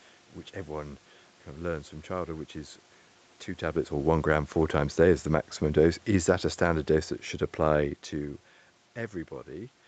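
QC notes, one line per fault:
5.64–8.02 s, automatic gain falling: after "a day is the", speech and background sink about 4 dB together. The gain control judged the input too loud, or its background noise too strong.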